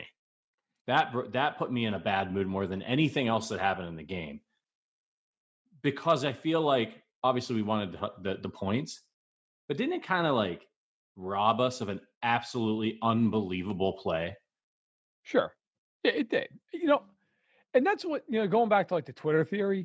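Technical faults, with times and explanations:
Nothing stood out on listening to this speech, which carries the usual call microphone processing with the lowest bass trimmed and nothing above 8 kHz.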